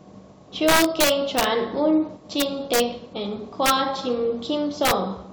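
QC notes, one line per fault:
0.68–1.44 s, 2.40–2.80 s, 3.66–3.70 s, 4.85–4.91 s: integer overflow. Loud speech peaks, driven about 5, 4, 3 and 4 dB past full scale, wrap around to the opposite sign instead of flattening. Each wrap throws the sample across the entire range, producing violent cracks far harsher than clipping. On the waveform, peaks jump from one rail straight to the other. On the spectrogram, bright full-height vertical streaks line up with those peaks.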